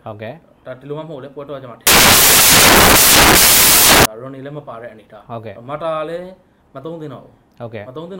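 From 1.87 to 4.05 s the audio turns into samples built from the wrong bytes: the reader misassembles each sample's bytes, whether by a one-byte offset, a swapped order or a wrong alignment, so the rapidly changing low-order bits take over as the large part of every value. The result is broadband noise, near white where the sound is loud. Unlike added background hiss or clipping, it replaces the sound outright and switches on and off abruptly at those two boundaries.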